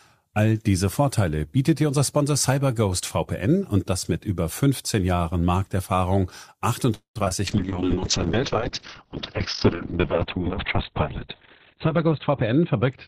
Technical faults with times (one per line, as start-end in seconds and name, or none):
6.94-7.16 call audio freeze
7.18-7.31 short concealed packet loss
7.47-13.08 call bitrate drop
11.74-12.96 jitter buffer speed-up